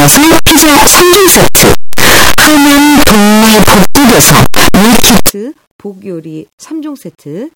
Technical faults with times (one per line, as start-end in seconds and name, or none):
0.00-5.29 signed and unsigned mixed up